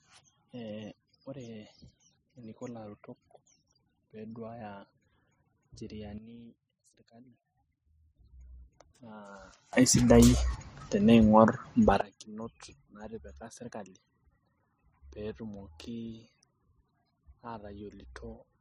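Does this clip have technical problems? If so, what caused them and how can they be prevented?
Yes. Sudden gain jumps occur from 6.18 to 8.16 s, dropping about 12 dB, and from 9.73 to 12.01 s, rising about 21 dB. Speech and background noise step together at each edge, likely from digital gain applied between samples without a ramp. Ramping every gain change over a few milliseconds prevents this.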